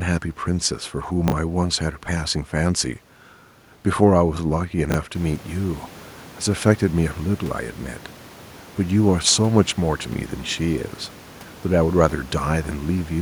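Chunks out of order at 1.28 to 1.32 s and again at 4.90 to 4.94 s: each time a 20 ms chunk of speech plays one slot late, after the chunk meant to follow it. Nothing is lost, but three hard joins make a brief jumbled flicker. The room noise that rises by about 12 dB around 5 s belongs to the recording and stays about 24 dB below the speech.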